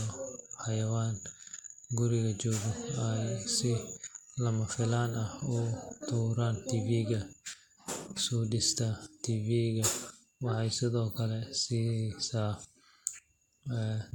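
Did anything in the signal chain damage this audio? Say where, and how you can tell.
No, none of the stages between capture and playback has left any audible damage on this speech recording, so there is nothing in the signal to point back to a faulty stage.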